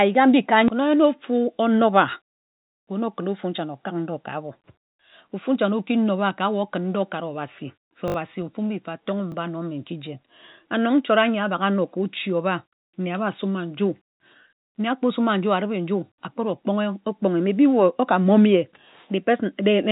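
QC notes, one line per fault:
8.08–8.14 s, repeated buffer: a tiny slice of audio plays three extra times back to back, each join hard-edged, so you get a short buzzy stutter. The repeat rate fits a 20 ms buffer that got replayed while the device waited for fresh audio, and roughly 70 ms of real audio goes missing.
9.32–9.34 s, repeated buffer: same thing, milder. One extra play of a 20 ms-sized chunk lands as a quick click, with about 20 ms of audio lost. It sits within the call-codec band limit at 4 kHz.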